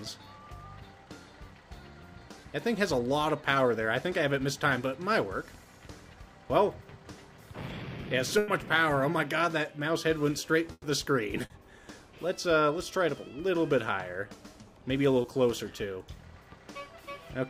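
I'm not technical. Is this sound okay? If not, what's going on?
No, there are two kinds of glitch. The first is a burst of packet loss, at 8.38 to 8.50 s and 10.72 to 10.86 s. Bits of the sound never arrived, so the receiver stretched the last sound out and faded it. About a tenth of a second is simply gone each time, and the second one even drops to silence briefly.

The second is short concealed packet loss, at 11.46 to 11.52 s and 15.22 to 15.26 s. These holes are tiny, around 40 and 20 milliseconds. The receiver patched over each one by continuing the sound, so you'd hear a quick smear or wobble rather than a gap.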